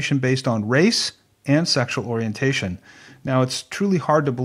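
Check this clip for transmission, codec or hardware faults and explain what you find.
Nothing wrong can be heard anywhere in this speech.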